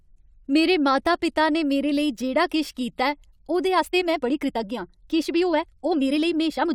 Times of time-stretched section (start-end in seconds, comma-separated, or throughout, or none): 3.70-6.74